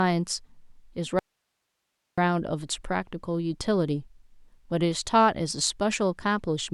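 At 1.19 s the speech cuts out abruptly. This is an audio dropout to a faint residue. For just under a second, until 2.18 s, the wanted signal is gone. Only a thin hiss remains, roughly 55 dB below the normal level. There is no fade in or out. The sound simply stops and restarts mid-flow. The likely cause is a brief loss of the signal feed while the path after the break stayed live, passing its own noise.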